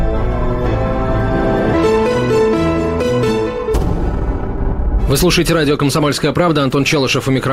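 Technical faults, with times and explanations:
1.73 to 1.75 s, skip ahead: about a second and a half of audio just vanishes, dropped while later sound was already queued, so playback jumps straight across with no gap.
3.11 to 5.99 s and 6.40 to 7.52 s, jitter buffer speed-up: the buffer was overfull, so short pitch-period slices got trimmed repeatedly. The sound runs about 25% fast, then 6%, at unchanged pitch, and feels hurried.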